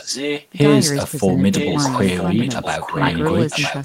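A likely incomplete echo cancellation at the far end causes an echo leak in this speech clip: a copy delayed by 0.97 s is audible at 0.0–0.47 s and 1.58–3.84 s, about 5 dB and then about 10 dB below the speech.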